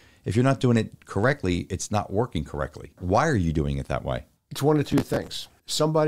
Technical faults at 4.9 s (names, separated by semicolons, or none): processor overload crackle